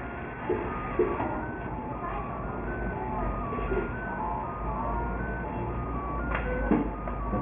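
An everyday sound recording, gritty and metallic from start to finish: aliasing folds high content back below a 3 kHz edge, fairly loud relative to the sound, which fits resampling to 6 kHz without an anti-alias filter.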